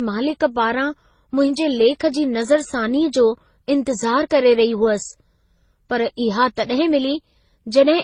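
Throughout the speech, the top end stops dead at about 9.9 kHz, and the sound carries a layered mix of artefacts from the different codecs, all heard at once. This points to transcoding between lossy codecs, likely a low-bitrate MP3 passed through Opus and then HE-AAC. Each later encoder wastes bits re-coding the earlier damage, adds its own, and the lowest band limit stays.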